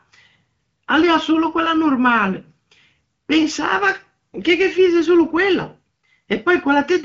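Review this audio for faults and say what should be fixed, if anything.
No faults; nothing needs fixing.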